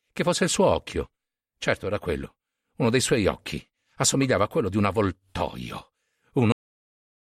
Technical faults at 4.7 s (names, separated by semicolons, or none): none